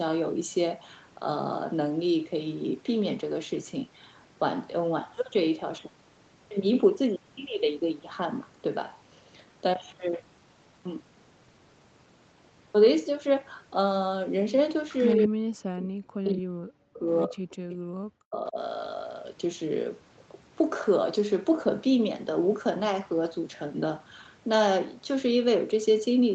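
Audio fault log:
14.89–15.24 s and 17.50–17.75 s, echo leak: A faint copy of the speech is heard trailing 230 ms behind. It sits roughly 20 to 25 dB below the speech. The far side's echo canceller likely let part of its loudspeaker pickup back into the call.
15.15–17.06 s, 17.26–17.51 s and 17.89–18.57 s, speech suppressed in double talk: The speech dips hard, by about 40 dB at its deepest. The first two drops overlap the echo. An echo canceller likely could not tell overlapping talk from echo and turned both down.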